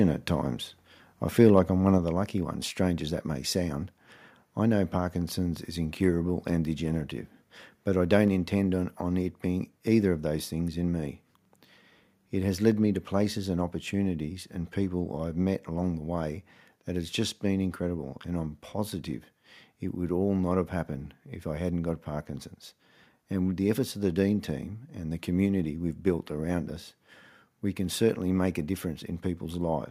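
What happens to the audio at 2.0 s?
At 1.98 s the whole signal, speech and background alike, drops by about 4 dB in a single step and stays at the lower level. This is a microphone volume stepped down event: the call software likely judged the input too hot and cut the device's capture volume at once. On a waveform the envelope shrinks abruptly at that point; on a spectrogram every band dims together along a sharp vertical boundary.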